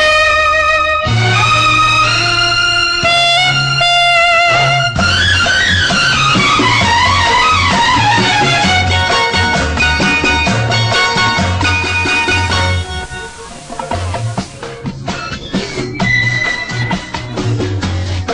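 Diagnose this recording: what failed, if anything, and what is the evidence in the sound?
Hiss rises and level dips about 1 dB from 11.67 to 14.89 s: reception stage, digital radio blending to analogue FM over 475 ms.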